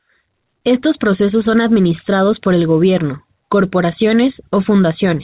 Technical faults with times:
none

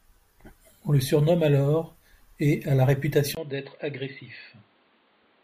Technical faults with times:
3.35-5.43 input switched to a poorer device

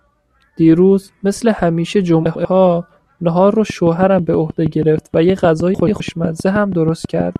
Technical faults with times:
2.25-2.45 frames out of order
3.70-7.37 train of clicks
5.74-6.00 frames out of order

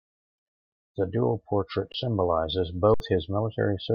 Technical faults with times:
1.92-1.94 underrun with held sample
2.94-3.00 underrun with held sample

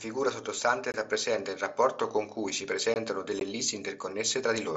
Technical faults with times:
0.92-0.94 gap between chunks
2.94-2.96 gap between chunks
3.40 unconcealed Bluetooth headset packet loss

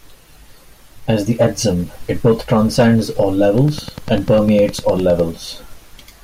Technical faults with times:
3.58-5.20 train of clicks

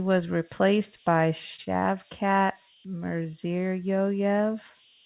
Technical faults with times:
0.00-5.05 converter idle tones
1.56-1.83 short concealed packet loss
1.64-1.78 short stall from a late packet
3.23-3.32 short concealed packet loss

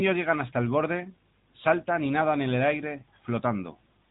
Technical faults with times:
0.00-4.11 AMR narrowband mobile codec

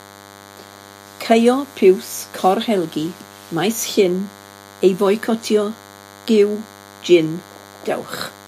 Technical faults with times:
0.00-8.48 DECT cordless phone buzz

